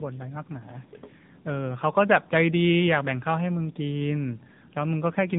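From start to finish the speech passes through tandem speech coding. It is decoded and re-encoded at each link boundary, so a second narrowband coder works on the already degraded output of the first. The sound points to two AMR-NB stages at about 10.2 kbit/s bridged by a G.711 link. Nothing survives above 3.7 kHz, so the speech sounds muffled, and the compounded coding adds roughness and a warbly, watery instability beyond a single pass.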